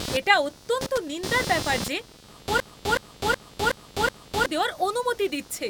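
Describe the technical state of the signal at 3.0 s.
At 3.0 s the speech is caught in a machine-gun stutter: one stretch of about 0.37 s repeats exactly, five times at 2.69 Hz, from 2.60 to 4.46 s. This is a system hang loop. The computer or driver froze while the sound hardware kept replaying its ring buffer, which fits a 16384-sample buffer. About two seconds of real audio are lost.

Under it runs a buzzing, chirping texture pulsing at roughly 200 Hz, around 10 dB below the signal. This computer activity noise is present throughout the clip. Processor, graphics or mouse load shifts the shared ground of the audio circuit, so the noise follows the machine's activity rather than the speech.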